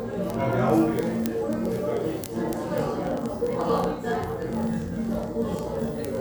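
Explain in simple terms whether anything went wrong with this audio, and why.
Yes. From 0.11 s to 6.19 s there is a fast, steady ticking on top of the sound, roughly fifty ticks a second and around three hundred in all. These are word clock ticks. The audio passed over a digital link to a device running on its own clock, not locked to the sender's. The two clocks disagree by about a thousandth, so every fiftieth of a second or so they slip past each other and one sample is dropped or repeated, causing a sharp click.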